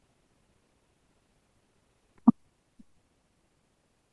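Throughout the clip the samples run out at a faster rate than they were captured, with no conversion, which fits 16 kHz audio played at 24 kHz: a wrong sample rate. Speech moves 1.5 times too fast and sits about seven semitones high, sounding hurried and chipmunk-like.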